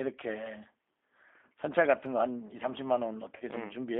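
From start to finish the speech carries G.729 codec damage, plainly audible. The line is confined to roughly 250 Hz to 3.5 kHz, and the voice has a rough, slightly synthetic grain, which points to an 8 kbit/s G.729A coder rebuilding each frame from a filter, a pitch predictor and a few pulses. Simple band-limiting would leave the voice thin but clean; here the excitation itself sounds coarse.

At 3.36 to 3.44 s comes VoIP packet loss concealed by the speech codec. About 40 ms of audio went missing, which fits four lost 10 ms frames. The decoder kept repeating its last pitch and filter at falling gain, so the voice smears into a short buzzy tone or coloured noise that fades rather than dropping to silence or clicking. Unlike a plain dropout, the weakened, distorted sound lingers briefly after the gap while the decoder recovers.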